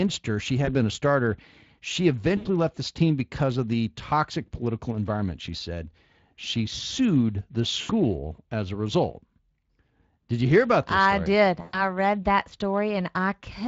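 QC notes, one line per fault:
Throughout, Speex codec: the CELP coding damage is plainly audible across all the speech, which points to a Speex rate around 20 kbps. Too few bits reach the excitation signal, so the damage stays constant and never comes and goes with time the way packet loss does.
0.65–0.75 s (just before "been a starter"), 2.37–2.48 s, 7.81–7.91 s (right after "sued the") and 11.61–11.85 s (between "this I story did" and "read that"), VoIP packet loss concealed by the speech codec: the gaps last 20, 80, 80 and 120 ms. The decoder extrapolates from the last pitch and filter, producing a buzzy tone or coloured noise whose gain is lowered frame by frame. Because each frame builds on the one before, the speech stays weak or distorted after packets return, which is why each disturbance outlasts its loss.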